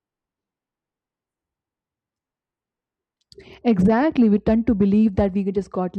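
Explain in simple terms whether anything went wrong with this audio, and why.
At 3.61 s the speech suddenly turns dull and muffled, and it stays that way to the end. This is de-emphasis applied wrongly. A treble cut meant to undo an earlier boost was used where no boost existed, or was used twice. So the high frequencies were turned down.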